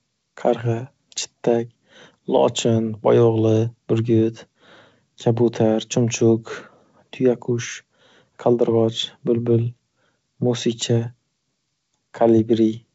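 No faults are heard anywhere in this speech clip.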